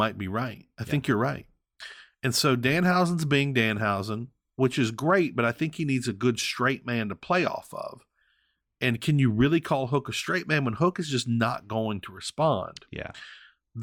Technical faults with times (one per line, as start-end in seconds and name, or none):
12.17-13.82 de-emphasis applied wrongly